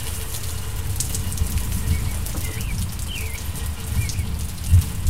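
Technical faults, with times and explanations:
0.00–2.52 s, doubled audio track: from the clip's start, every sound repeats about 150 ms later as one full-band copy roughly 5 dB quieter, likely captured twice via a slower path. Unlike echo, this copy never decays, lacks room colour, and ends abruptly.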